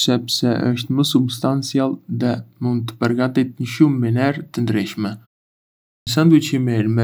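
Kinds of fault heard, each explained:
Clipped start after a pause: after a silence of about 0.78 s, the output path has gone idle and does not wake in time, so the first 108 ms of speech from 5.96 s is lost. The talk resumes abruptly, already underway. That differs from muted pauses, where the gaps go silent but nothing is cut.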